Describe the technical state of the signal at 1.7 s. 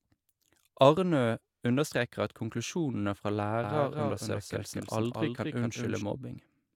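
At 1.7 s the speech signal is intact, with no audible fault at that moment.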